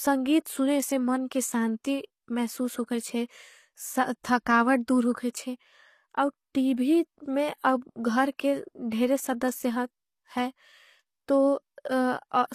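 From the first moment the speech carries plainly audible damage of the kind HE-AAC compression leaves, the likely cause at a bitrate around 24 kbps. The upper band is rebuilt from copied lower bands rather than coded, so sibilants come out gritty and metallic, with harmonics that fail to line up above the crossover. On a spectrogram the treble looks like smeared, repeated patches of the lower spectrum, and nothing appears above 14.9 kHz.

At about 0.45 s a pre-echo precedes a sharp attack. The codec spread its quantisation noise across the whole transform block, so noise meant for the loud onset also fills the quiet instant just before it. It is heard as a brief hiss leading into a softened, smeared attack. On the waveform a thin noise smear of about 10 ms sits ahead of the transient. On a spectrogram it shows as a broadband wash just before the onset.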